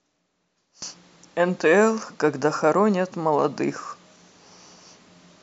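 No technical faults can be heard anywhere in the recording.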